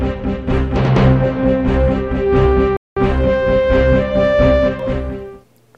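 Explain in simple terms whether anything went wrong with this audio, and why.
Something did go wrong: a rebuffering stall at 2.77 s. The sound stops dead and stays silent for about 0.2 s, until 2.97 s, then carries on exactly where it left off. The player ran out of downloaded audio and had to wait for more to arrive. Unlike a dropout, where a piece of the sound goes missing, nothing is skipped here; the pause just adds about 0.2 s to the playing time.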